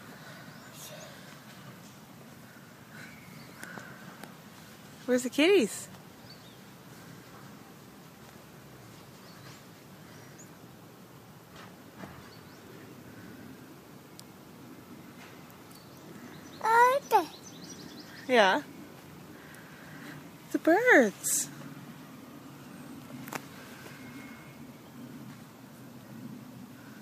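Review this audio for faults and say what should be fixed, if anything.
Listening through, nothing stood out that needs fixing.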